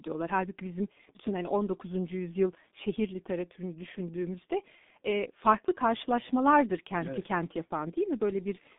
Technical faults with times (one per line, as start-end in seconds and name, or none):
0.00-8.79 G.723.1 codec